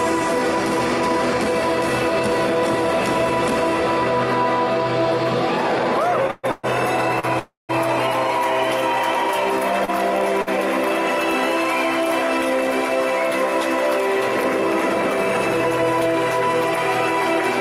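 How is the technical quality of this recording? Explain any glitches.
The recording has a cluster of network timing faults between about 6.3 and 10.5 seconds, where the audio drags, stalls and briefly drops out. No content is lost.

From 6.27 to 7.25 s there are repeated stalls (stutter). Packets kept arriving late, so the jitter buffer emptied four times and the receiver held the last sound for about 297 ms in total, with the longest gap 127 ms. About 30% of that stretch is filled-in sound, so the audio visibly stutters and drags.

From 7.39 to 7.71 s there is a call audio freeze. Packets were likely held up in transit for roughly 300 ms. The last sound is continued and fades, with about 160 ms of silence, before the audio resumes where it stopped.

At 9.85 s and 10.42 s there are short stalls from a late packet. Each time a packet missed its slot, so the preceding sound is stretched by 31 ms and 48 ms respectively, producing a slight held, buzzy dip.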